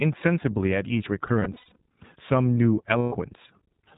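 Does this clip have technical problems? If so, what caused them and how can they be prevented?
Yes. Throughout, the speech sounds band-limited and slightly rough and synthetic, with nothing above 4 kHz. That is the iLBC codec, whose independently coded frames fit its 15.2 kbps, 20 ms mode. Prevent this by using a wideband codec such as Opus when the network allows.

From 1.40 to 1.76 s and from 2.98 to 3.14 s, the speech turns into held, buzzy vowel-like sounds. These are lost iLBC frames: the decoder repeats the last pitch cycle mixed with noise. Over the first span they cover about 200 ms, with the longest gap around 70 ms, and over the second about 140 ms. Prevent this by improving network reliability or adding forward error correction and a jitter buffer.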